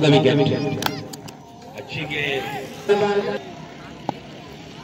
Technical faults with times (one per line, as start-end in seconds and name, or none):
2.88 stream segment skipped